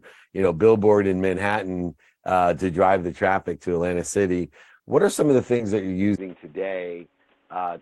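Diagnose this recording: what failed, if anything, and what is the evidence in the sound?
Short concealed packet loss occurred at the network and decoder stage, twice. About 20 ms of audio arrived too late each time, at 4.77 to 4.81 s and again at 5.57 to 5.61 s, between "are some of the" and "that you're". The decoder bridged each gap by extending the preceding sound, pitch-matched where voiced and as shaped noise where not, then crossfaded back. Each spot is heard as a brief smear.

Input switched to a poorer device is the likely cause of the change at 6.16 s, right after "that you're", at the capture stage. A 20 ms silence marks the switch. From there to the end nothing is present above 3.8 kHz, so the sound turns dull and boxy. The level drops by roughly 10 dB, and a new background noise sits around 30 dB below the signal. That is the bandwidth, gain and noise signature of a different, narrower-band input device.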